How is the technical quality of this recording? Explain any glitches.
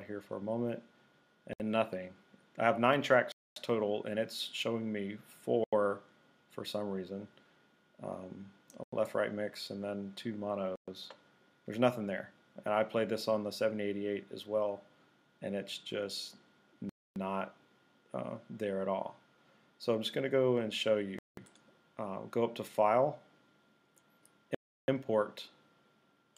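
The audio has repeated dropouts. The sound cuts to silence at 1.53, 3.32, 5.64, 8.84, 10.76, 16.89, 21.19 and 24.55 s, for between about 66 and 335 ms each, then resumes. The likely cause is a Bluetooth stall: interference delayed packets and the receiver's buffer emptied until retransmissions arrived.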